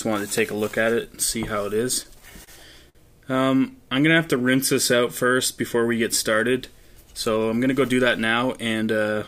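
Between 2.03 and 2.49 s the audio shows repeated stalls (stutter): four brief hold-ups, the longest 28 ms, add 58 ms of continued sound as packets keep arriving late. Nothing is lost, which sets it apart from packet-loss dropouts: the sound drags and catches rather than skipping ahead. At 2.89 to 2.97 s a single short stall from a late packet holds one sound for 56 ms before playback resumes from the same point, adding 56 ms of delay. Unlike the stutter just before it, this is one isolated stretch, heard as a held sound with a slight buzz or dip. From 3.93 to 5.35 s a jitter buffer slow-down plays the audio at 94% speed, adding 99 ms by repeating single pitch periods and bits of pauses to rebuild the reserve. Pitch stays the same, so this is not a tape-style slowdown. Sounds are simply drawn out, sometimes with a faint warble. From 7.58 to 8.89 s a jitter buffer speed-up runs at 106% speed, trimming about a tenth of a second in tiny pitch-period cuts to shed excess delay. 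Pitch is again unchanged, which separates it from a sample-rate error. The result sounds hurried and compressed in time.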